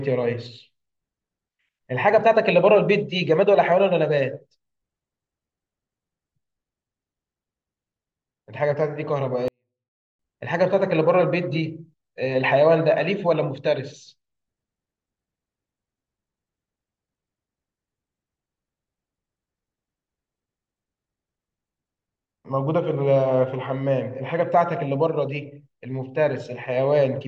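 At 9.48 s the speech falls almost to silence until 10.19 s: a 24-bit alignment error (too quiet). The samples sit in the low 24 bits of each 32-bit word but are read as full 32-bit values, so the level drops by about 48 dB while staying clean.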